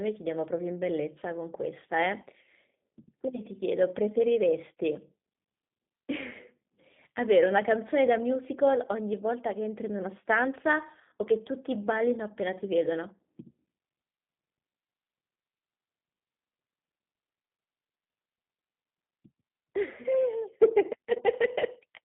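Throughout, G.729 coding strips the speech to a 150 Hz–3.6 kHz band, fitting an 8 kbit/s stream. It sounds plainly rough and synthetic, and a spectrogram shows nothing above 3.6 kHz.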